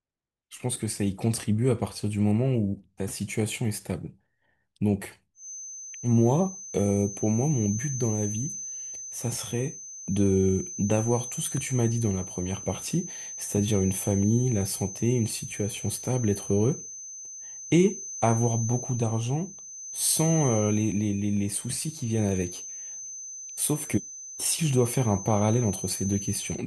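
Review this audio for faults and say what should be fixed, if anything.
Feedback whistle from 5.33 s to the end: a thin, steady tone near 6.2 kHz sits about 15 dB below the speech, swelling and fading slowly in level. The likely cause is a loudspeaker-to-microphone loop held just short of runaway feedback. Prevent it by cutting gain near 6.2 kHz or moving the microphone out of the loudspeaker's path.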